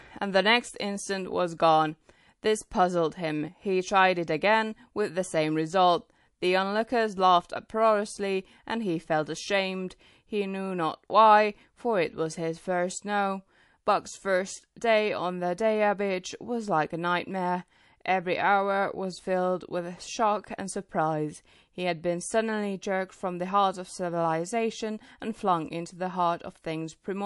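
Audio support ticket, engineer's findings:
Throughout: watery, swirly speech, chirpy s sounds, nothing above 11.3 kHz. Likely MP3 compression, consistent with about 48 kbps. Spectrogram shows a hard ceiling plus flickering holes where weak bands drop out.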